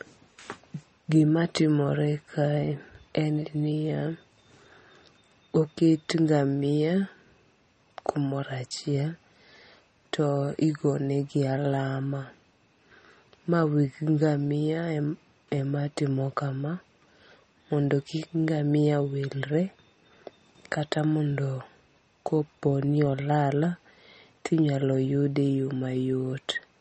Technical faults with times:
0.00-26.81 MP3 compression

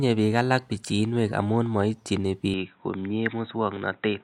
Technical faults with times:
2.54-4.24 input switched to a poorer device

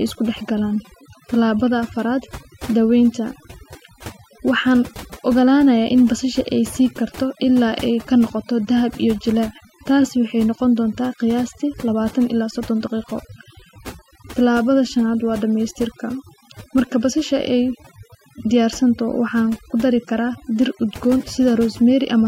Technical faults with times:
0.00-22.27 overdone noise removal

